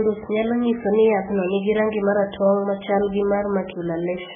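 From start to finish the speech carries heavy MP3 compression damage, likely from an encoder starved of bits at a very low rate, around 8 kbps. Nothing survives above 3.5 kHz, so the top is dull and muffled, while weak frequency lines below it drop in and out between frames, giving a watery, swirling texture and smeared consonant attacks. A spectrogram shows a hard flat ceiling at 3.5 kHz with patchy, flickering blocks of energy underneath.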